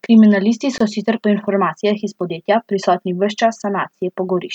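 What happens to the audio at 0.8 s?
At 0.78 to 0.80 s the speech drops out for about 24 ms, a gap at a join of encoded pieces: the audio was coded in 4-second chunks and spliced untrimmed, so encoder delay and end padding leave a short silence with smeared edges before "sicer po informacijah iz" picks up again.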